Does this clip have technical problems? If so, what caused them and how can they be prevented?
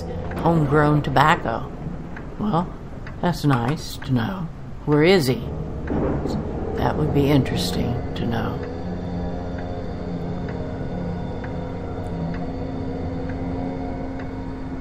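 No, nothing technical goes wrong in this clip, so there's nothing to trace back or guard against here.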